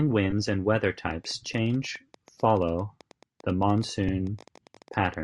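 Throughout the speech there is a breathy, grainy edge where the upper band has been thinned and refilled with noise, likely Bluetooth LC3 compression. The steady texture, rather than swirly pre-echo, fits LC3 at around 48 kbps with 7.5 ms frames.

From 0.31 to 0.33 s, just before "and weather", lost LE Audio frames leave a brief noisy smear as the decoder repeats the last spectrum with scrambled phase. A shorter loss recurs at 4.08 s. It smears rather than clicking or dropping to silence.

From 1.11 to 5.15 s, after "and weather", a train of clicks ticks at about 11.7 per second, unevenly spaced, roughly fifty in all and about as loud as the speech, likely from interference. The much-the-same repeating shape separates it from random crackle.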